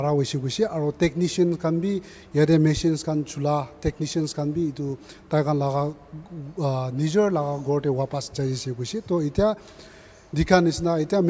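No technical faults can be heard; the audio carries the usual signature of a call's microphone processing, with the lowest bass trimmed and nothing above 8 kHz.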